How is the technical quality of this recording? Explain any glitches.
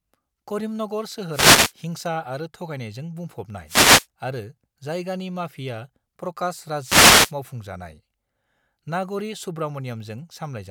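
The speech is marred by three wireless microphone noise hits, at 1.31 to 1.73 s (just before "हिंसा आरो थगायनायजों"), 3.66 to 4.07 s (before "आरो जायगानि माफिया"), and 6.82 to 7.33 s. Each time the FM radio link fades as reflections cancel, receiver noise surges, and you get a brief swish of static over the voice.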